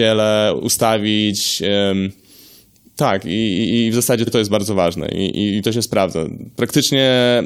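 At 4.26 s a block of about 46 ms of the speech plays twice, then at 6.40 s a block of about 70 ms does the same: repeated frames, where compressed frames were sent twice, producing a brief stutter and lengthening the audio accordingly.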